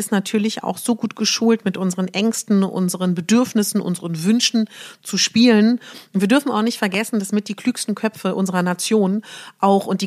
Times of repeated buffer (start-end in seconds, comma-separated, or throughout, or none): none